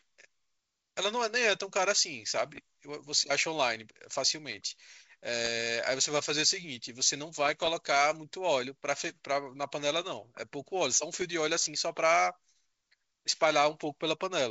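Bit errors on an ADPCM link strike at 2.46 to 2.60 s, 5.44 to 5.48 s, 7.46 to 7.69 s and 11.16 to 11.23 s. A few bits per thousand flip. Each throws off the decoder's step size and prediction. Pops and rough bursts follow, with brief level jumps.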